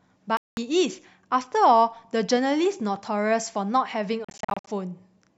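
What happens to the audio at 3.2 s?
Nothing goes wrong at 3.2 s; the speech carries on intact through that moment with no audible fault.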